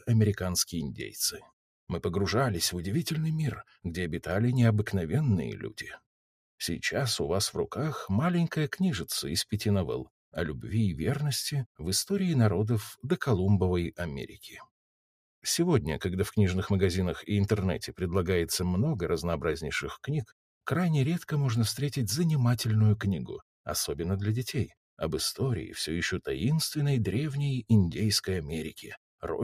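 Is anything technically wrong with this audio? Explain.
Yes. From 1.38 to 1.53 s there is sound cut by the noise suppressor: for roughly 150 ms the suppressor misjudged the sound as noise and applied its gain reduction to it, pulling the level down by about 12 dB at the deepest point. The passage audibly sinks, any sustained or decaying part is clipped short, and the level then returns once the suppressor releases.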